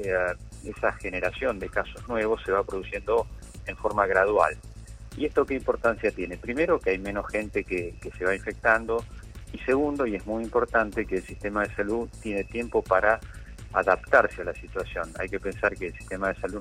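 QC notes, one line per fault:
No faults found in this clip. Nothing calls for a timestamp or a note.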